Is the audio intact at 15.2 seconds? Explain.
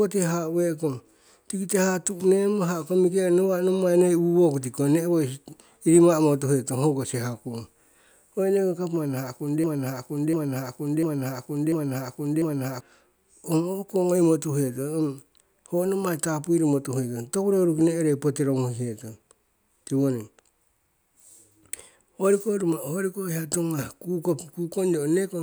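Yes, the audio is intact at 15.2 seconds, with no dropout, glitch or other fault at that point.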